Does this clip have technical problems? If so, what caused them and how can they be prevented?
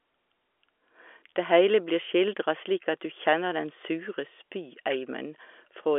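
No, nothing here is a technical problem: the speech is carried over ordinary G.711 telephone coding, so it sits in the usual 300 Hz to 3.4 kHz line band with nothing above about 3.7 kHz, and that narrow, phone-like bandwidth is simply what the telephone path does.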